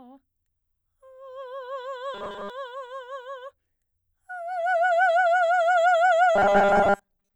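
From 2.14 to 2.50 s, and again from 6.36 s to the end, the music collapses into a rigid, metallic 200 Hz buzz: robotic sound from repeated short buffers. New audio likely arrived too seldom, so a roughly 5 ms slice kept repeating in place of most of the real signal.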